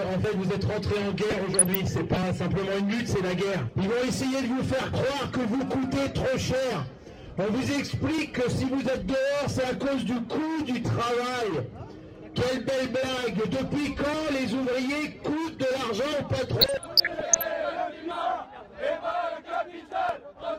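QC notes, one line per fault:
1.18–2.17 s and 16.61–17.45 s, DAB burbling: burbling noise breaks over the programme for about a second each time, rougher in the second burst. Weak reception lets bit errors slip past the error correction into the MP2 audio data. Corrupted samples put short blips of noise in single sub-bands, and corrupted scale factors make sub-bands jump in level for up to a frame. Across dozens of frames in a row, those flickering bands form the burble.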